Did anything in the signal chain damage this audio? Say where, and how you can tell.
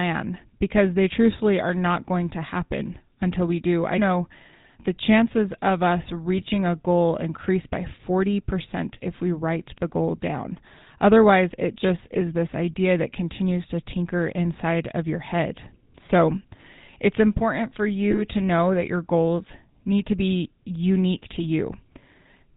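Yes. At the codec stage, GSM full-rate coding, consistent with 13 kbps, drives a vocal-tract model with sparse pulses and drops everything above 4 kHz, giving buzzy, gravelly speech throughout.

On the radio link, GSM bit errors corrupt filter, pitch and gain values, causing squawks and pops at 6.38–6.46 s after "the chances of us", 18.11–18.27 s after "it's important for", and 21.36–21.47 s after "need to be unique".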